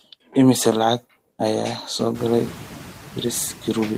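Noise suppressor artifacts run through the whole speech clip. The suppressor cuts bands it judges to be steady noise by about 4 dB, frame by frame, so the background dips between words and swells back beneath them. A spectrogram shows the noise floor darkening in pauses and lifting under speech energy. The room noise itself jumps by about 22 dB at roughly 2 seconds, settling about 16 dB below the speech.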